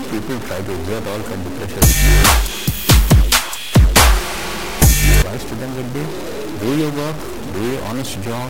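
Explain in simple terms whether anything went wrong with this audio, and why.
Something did go wrong: from start to finish the sound carries a harsh, buzzy distortion, and even the quiet gaps fill with a gritty noise. That's what a stuck bit sounds like, likely one fairly high bit jammed, so many samples come out shifted and the quiet parts can't settle.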